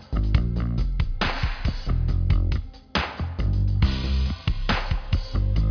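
No technical faults are audible anywhere in the clip.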